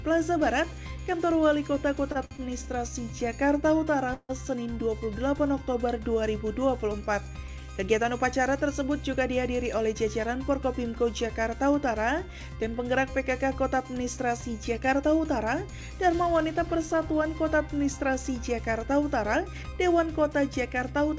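Two short stalls from a late packet come first, at 2.12 to 2.17 s and 2.25 to 2.33 s. Each time a packet was late and the jitter buffer ran dry. The receiver held the last sound for 30 ms, then 59 ms, and resumed where it stopped. Nothing is lost. The sound just hangs briefly, with a faint buzz or dip. The two come close together, so the audio stutters twice.

From 4.14 to 4.31 s there is a call audio freeze. The last sound is stretched into a fading buzz or hiss for 152 ms, and about 30 ms of that is silent. Packets were likely held up in transit, emptying the jitter buffer. When they arrive, the audio picks up where it left off. The result is an added gap, with little or nothing missing.

Jitter buffer speed-up follows at 9.09 to 9.95 s and again at 14.78 to 15.31 s. The buffer had built up extra audio, so the receiver trimmed many tiny pitch-period pieces to cut the delay. Roughly 50 ms goes each time. 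The audio runs at 106% and then 108% of normal speed. Pitch stays the same, but the pace sounds hurried. Throughout, the call path's band limit holds, with nothing above 8 kHz, which fits G.722.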